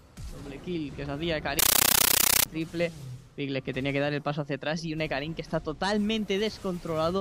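From 1.59 to 2.46 s the audio turns into very loud, chattering static, the sound of a compressed stream played as audio. An undecoded AC-3 (Dolby Digital) bitstream, consistent with about 640 kbps, is being treated as samples. The waveform shows bursts of about 13.3 ms separated by flat zero padding, repeating 31.25 times a second. The spectrogram shows matching broadband vertical stripes.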